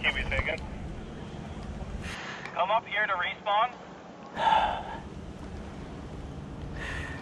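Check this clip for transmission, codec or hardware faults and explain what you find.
Input switched to a poorer device, from 2.15 to 4.37 s: the sound abruptly loses everything above 7.6 kHz and picks up a new noise floor roughly 30 dB below the signal, at much the same level and with no gap, then clears again. The likely cause is a capture path handing over to a narrower-band microphone or headset profile and back.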